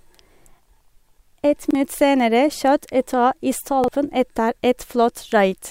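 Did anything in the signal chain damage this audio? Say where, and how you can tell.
Yes. The damage happens at the driver or buffer stage, as a repeated buffer. At 1.71 s and again at 3.84 s, a short slice of speech plays twice in a row. Each repeat lasts about 43 ms and has a hard join, so it sounds like a quick stutter. The length fits a 2048-sample buffer. New audio arrived late, so the device replayed the last block, and roughly 40 ms of speech went missing each time.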